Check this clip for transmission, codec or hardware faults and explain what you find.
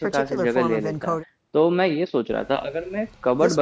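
Nothing wrong turns up here, just speech through ordinary call microphone processing, which trims the lowest bass and leaves nothing above 8 kHz, exactly as it should.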